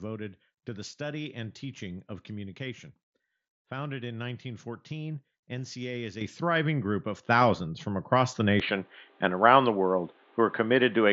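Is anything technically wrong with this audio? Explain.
Yes. Microphone volume stepped up at 6.21 s, just before "thriving group of", and again at 7.23 s, right after it. The call software judged the input too quiet and raised the device's input level in single steps, about 9 dB then about 5 dB, so speech and background jump louder together.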